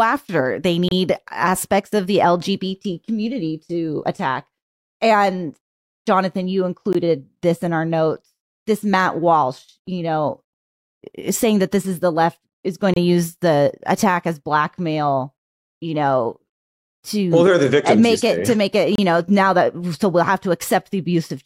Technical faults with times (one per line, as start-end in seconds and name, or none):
0.88-0.91 gap between stream segments
6.93 gap between stream segments
12.94-12.96 gap between stream segments
18.95-18.98 gap between stream segments